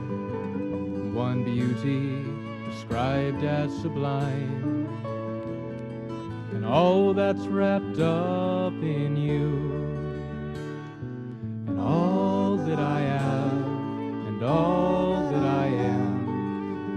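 No technical faults can be heard; the audio carries the ordinary character of a call path, with the top end stopping at about 12 kHz in a way that fits an Opus stream at a moderate bitrate.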